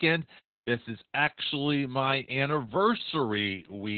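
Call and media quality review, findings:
Opus voice compression, throughout: speech band-limited, nothing above 4.4 kHz; heavy codec damage, muffled and hoarse. Narrowband SILK linear-prediction coding with coarse excitation, consistent with roughly 8 kbps.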